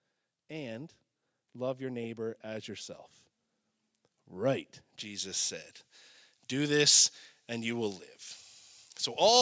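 A speech clip with two faults. From 0.48 to 3.03 s the automatic gain rising fault shows up: the gain control judged the input too quiet and steadily lifted its gain by about 5 dB, so the voice and the background swell together over those two and a half seconds. From 5.00 s to the end, pre-emphasis is left on. The treble boost applied for recording or transmission, which fits a J.17-style curve lifting 10 kHz about 11 dB relative to 1 kHz, was never undone, leaving the highs too strong. The voice turns thin, bright and sibilant up to the call path's 8 kHz ceiling.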